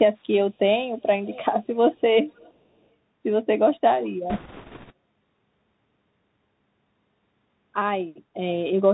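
Bluetooth CVSD headset codec, throughout the 9-second speech: the sound has passed through the narrowband headset codec, which fits a 64 kbps link sending one bit per sample to say whether the waveform steps up or down, with an adapting step size. Nothing above 4 kHz survives, so the speech is dull and boxy. Where loud, bright sounds rise faster than the step can follow, they distort; s sounds come out scratchy, and a granular hiss sits beneath the speech throughout.

Echo leak, at 1.23–1.45 s, 1.64–1.76 s and 2.27–2.53 s: a faint repeat of the speech trails it by 485 ms in three short scraps. The first is the most noticeable at roughly 20 dB below the speech, and the other two are much quieter, around 30 to 35 dB down. The likely cause is a far end playing the call over a loudspeaker, where the echo canceller failed to remove everything its microphone caught and sent those fragments back.

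Bit errors on a Bluetooth voice link, from 4.30 to 4.92 s: for about 0.6 s a rushing, crackly noise spreads over the speech. Bits on the headset link were flipped at a rate of around 7 percent. Because each bit only nudges the waveform by one small step and the codec soon recovers, there are no sharp clicks, just a dense crackle that fades once the errors stop.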